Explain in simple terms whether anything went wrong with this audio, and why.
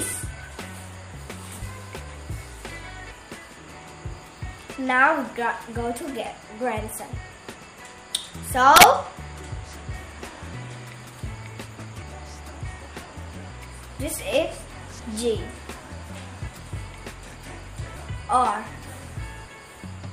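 Something went wrong once, at about 8.76 to 8.84 s: an integer overflow. The system stores loudness as whole numbers with a fixed ceiling, and for this brief moment the signal was pushed just slightly past that ceiling. Instead of being held at the top, the number wrapped around to its extreme opposite value. To your ear, that sudden flip comes across as a sharp, violent crack on the loud sound, much harsher than ordinary distortion.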